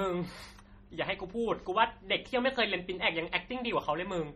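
Throughout, heavy MP3 compression, likely near 32 kbps, makes weak detail flicker between frames into a watery, swirly texture rather than a steady dullness.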